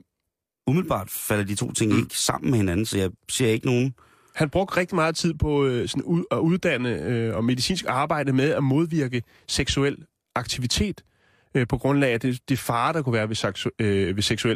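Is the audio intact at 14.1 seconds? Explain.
Yes, the speech at 14.1 seconds plays through intact, with no dropout, click, distortion or other fault at that point.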